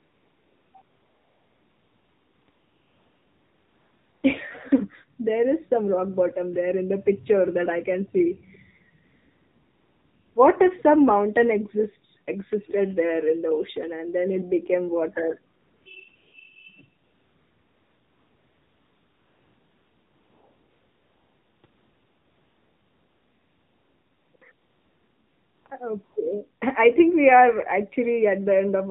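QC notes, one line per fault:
Throughout, AMR narrowband mobile codec: the speech passes through the AMR-NB mobile codec at 7.4 kbps, which samples at 8 kHz and rebuilds the voice from a vocal-tract model excited by a handful of pulses per subframe. Nothing above 4 kHz survives, so the sound is dull and boxy. At this low bitrate the pulse excitation is coarse, making the voice plainly buzzy and synthetic rather than natural.
0.00 to 26.16 s, AMR comfort noise: twelve stretches where the sender judged the talker silent, stopped transmitting speech frames, and the receiver substituted generated noise shaped from a rough level and spectrum estimate. They range from 20 ms to 4.6 s, the longest from 17.04 to 21.64 s, with others at 0.00 to 4.24 s and 9.04 to 10.36 s. The genuine background gives way to a smooth, even hiss that switches in and out at the gap edges.
12.67 to 12.73 s, echo leak: a brief, faint copy of the speech arrives about 382 ms after the original, roughly 25 dB below it. 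It is a short scrap rather than a sustained repeat. The likely cause is a far-end loudspeaker whose sound reached its microphone and was not fully removed by the echo canceller, so a delayed remnant was sent back down the line.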